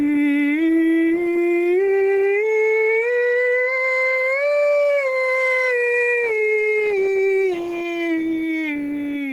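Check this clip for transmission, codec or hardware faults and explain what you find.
There is one fault, gain pumping, and it runs through the whole clip. The likely cause is input gain set far too high for the microphone, with a fast limiter or compressor clamping down every time the music gets loud. The level swings by around 10 dB as it grabs and releases. Loud and quiet moments sit unnaturally close together, so the music sounds squashed and breathing.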